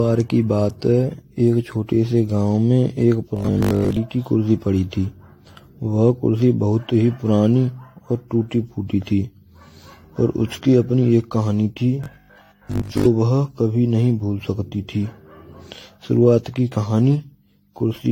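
Throughout the 18-second recording, the speech sounds swirly, smeared and hollow, with blurred attacks and nothing above 16.6 kHz. This is generation loss, likely from encoding about five times in a row with AAC-LC at a rate near 64 kbit/s, each pass adding fresh quantisation noise.

From 3.37 to 3.97 s and again from 12.04 to 13.06 s, the voice turns into a rigid metallic buzz at 50 Hz. This is robotic sound from repeated short buffers, likely a 20 ms chunk replayed over most of each span while the real audio is skipped.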